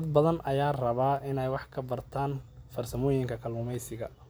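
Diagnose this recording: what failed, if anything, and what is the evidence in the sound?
Nothing in this speech recording points to a failure at any stage of the chain. There is no audible event to pin to a time, so there is no mechanism to diagnose.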